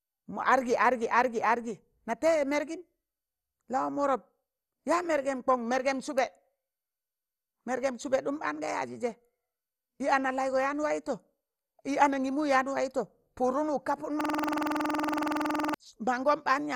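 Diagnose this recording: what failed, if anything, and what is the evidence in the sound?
The speech sounds dull and gurgling all the way through, with a granular roughness and nothing audible above about 12.1 kHz. This points to the codec stage, most likely MP2 compression at around 64 kbps. At that rate the encoder cannot fund all 32 sub-bands, so it shuts off the upper bands and coarsely quantises the remaining ones. The bands switching on and off produce the flickering, watery texture.

From 14.21 s to 15.74 s the speech stops moving forward and becomes a rapid, rattling buzz. A single 46.44 ms fragment repeats about 33 times, which gives a repeat rate of 21.5 Hz. This is a system hang loop at the driver or buffer stage. The host stalled while the audio hardware kept replaying the same ring buffer, and the length of the fragment fits a 2048-sample buffer.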